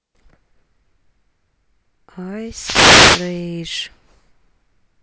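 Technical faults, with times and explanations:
2.45 to 3.44 s, wireless microphone noise hit: for about a second a swish of static rises over the speech, because the radio link faded as reflections cancelled the signal, letting the receiver's own noise rise.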